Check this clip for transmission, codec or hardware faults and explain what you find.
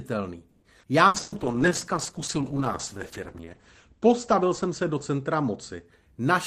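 Four kinds of network fault affect the speech, all clustered in the first six seconds.

From 0.49 to 0.65 s the sound stalls into a held, fading buzz or hiss of about 130 ms, then carries on with nothing lost. This is a call audio freeze, likely late packets draining the jitter buffer so the receiver stretched the last sound until delivery resumed.

At 0.80 to 0.86 s the speech jumps forward after a brief 30 ms fill, dropping roughly a tenth of a second. This skip ahead happens when a stretch of queued audio is discarded to catch up on delay, joining the two sides almost directly.

Two bursts of packet loss follow, at 1.07 to 1.17 s and 1.20 to 1.35 s. Each sounds like a short held buzz or hiss that fades (70 ms, then 120 ms) before the speech resumes further on, with 60 ms and 120 ms gone. The receiver concealed the lost packets by extending and attenuating the last sound.

From 1.2 s to about 5.9 s the voice turns muffled and rough, with the top end cut from 20 kHz down to 8 kHz for roughly 2.6 s at its worst. 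This call bitrate drop fits the encoder being pushed from around 32 kbps to about 10 kbps after the bandwidth estimate fell.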